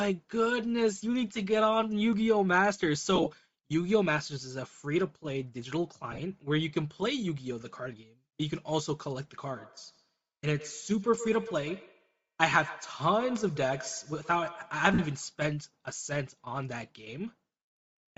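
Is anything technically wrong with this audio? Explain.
Yes. There are three kinds of fault.

Bluetooth LC3 compression runs through the whole clip. The speech has a breathy, grainy edge, and the top end sounds thin and hissy. This is likely the LC3 codec of Bluetooth LE Audio working at a low bitrate, around 32 kbps, with short 7.5 ms frames. At that rate the encoder drops much of the upper spectrum and fills it with shaped noise. That noise fill is what gives the speech its grain.

Lost LE Audio frames occur at 3.15 to 3.27 s, 6.12 to 6.20 s and 14.94 to 14.99 s. Each gap is brief, roughly 45 to 53 ms of missing audio in total. That fits several 7.5 ms frames dropping out. In the first two, the losses are scattered in short runs rather than one block. The decoder fills each gap by repeating the last spectrum with randomised phase. So the speech briefly smears into a noisy, rough texture instead of going silent.

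Feedback echo between two devices is audible from 9.43 to 15.37 s. The speech comes back roughly every tenth of a second, at most about 15 dB below the direct sound. Two devices in the same room are on one call. One plays what the other's microphone picked up, and that microphone hears it again. Neither echo canceller removes the other device's playback. So each sound returns as a thin, ringing repeat.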